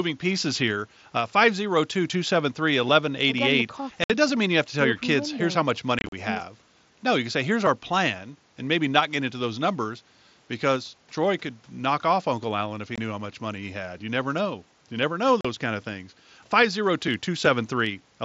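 Unconcealed Bluetooth headset packet loss punches gaps into the speech at 4.04 s (60 ms), 5.99 to 6.13 s (90 ms lost, scattered), 12.96 s (22.5 ms) and 15.41 s (37.5 ms). Nothing conceals the lost packets, so the gaps are short holes with abrupt edges, not the smeared repeats of concealed loss.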